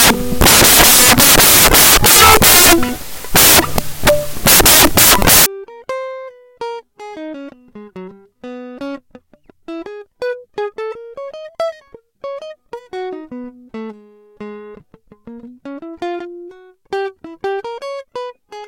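From the start to 5.46 s the music is buried under loud, harsh broadband noise from samples built from the wrong bytes: misassembled bytes push the low bits into the high ones. Unlike added hiss, the noise tracks the signal.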